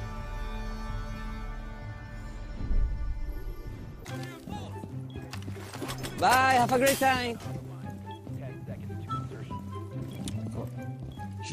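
No technical fault is audible anywhere in the audio.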